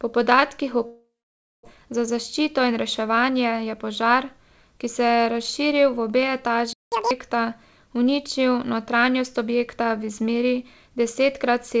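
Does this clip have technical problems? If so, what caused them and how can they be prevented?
Yes. From 0.86 to 1.67 s there is what sounds like a long network dropout. The last sound is stretched into a fading buzz, then about 0.56 s of silence, and speech resumes with roughly 0.6 s missing. On a waveform this shows as a decaying smear followed by a flat gap. Prevention: use a more stable network path with redundancy or FEC.

From 1.76 to 4.34 s a jitter buffer speed-up trims short pitch-period pieces so the speech runs about 6% fast at unchanged pitch, ending before "ki se je razširil". Around 150 ms is removed in total. Spectrogram harmonics stay level while syllables compress. Prevention: reduce network jitter so the buffer doesn't overfill.

After "je razširil v obe", a playback stall silences output from 6.73 to 6.92 s for about 187 ms, likely from a starved or blocked audio thread. 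The waveform shows an abrupt flat gap mid-sound. Prevention: give the audio thread higher priority and larger output buffering.

Right after, from 6.92 to 7.11 s, catch-up at higher speed plays the backlog at 2× by resampling. Pitch jumps roughly ten semitones, so the spectrogram shows harmonics spaced wider and shifted upward, then dropping back. Prevention: skip or time-stretch the backlog instead of resampling.

The call path runs through G.722 at 64 kbps, with nothing above 8 kHz on the spectrogram.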